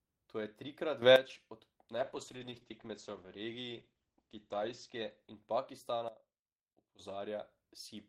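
A speech recording with three faults. At 1.02 s the level leaps up by about 11 dB and stays there until 1.16 s, and from 6.08 to 6.99 s it drops by about 16 dB. Each is a sudden gain jump, most likely a digital gain setting applied with no ramp. The background noise steps up and down together with the speech, and the change happens instantly rather than over a fade, which rules out a performer moving or an automatic level control easing in. Between 1.94 and 5.87 s there is a call bitrate drop. The speech turns rough and watery, and the top end is cut off, with content above roughly 8 kHz gone where the full range had reached about 20 kHz. The coarseness is worst for nearly 2.9 s, which points to the encoder falling from around 32 kbps to around 11 kbps. Unlike a gain fault, the loudness holds steady while the texture degrades. Unlike a plain low-pass filter, the remaining band also carries smeared, warbling coding artefacts.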